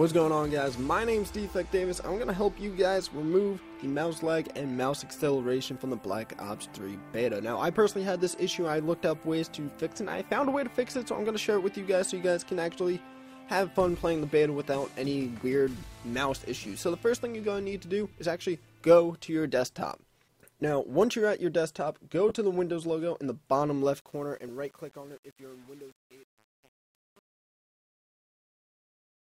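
At 22.29 to 22.31 s there is a brief dropout of lost LE Audio frames. About 20 ms go missing, which fits two lost 10 ms frames. The LC3 decoder fills the gap by repeating the last spectrum with randomised phase. The sound turns into a short noisy smear rather than a clean gap.

From 23.99 s to the end, truncation distortion on a fade takes over. The fade out begins around 24 s, but the gain stage keeps too few bits and adds no dither. The coarse steps suggest an 8-bit stage. From 24.07 s the quiet tail grows gritty as the waveform collapses into a few square steps.

At 24.48 s a single LE Audio frame is lost, about 10 ms. It leaves another tiny smeared blip inside the fade.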